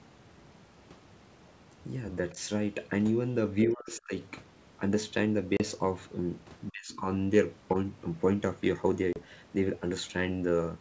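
Speech carried on a G.722 wideband call shows three kinds of fault. Faint scraps of the other side's voice leaking through appear at 2.3, 6.89 and 7.68 s, about 25 to 35 dB below the talker. These are likely residual loudspeaker echo the canceller missed, and the sound is a second voice rather than noise. Speech suppressed in double talk appears at 3.67–4.14 s and 6.7–7.06 s, with the talker dipping by roughly 35 to 40 dB for a few hundred milliseconds. It is likely ducking of the talker, not lost packets. Packet loss on an ADPCM call produces abrupt 30 ms silences at 5.57 and 9.13 s, consistent with about three lost packets. Unlike the ducking, speech returns slightly distorted while the decoder resynchronises.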